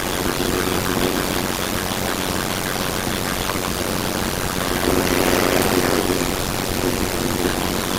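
From start to finish there's a block size mismatch (padded): each short block gets zero-filled to the next stage's larger size, so you hear a steady buzz around 91.9 Hz, and everything plays at 0.533 speed, slow but at roughly normal pitch. That fits 256-sample blocks.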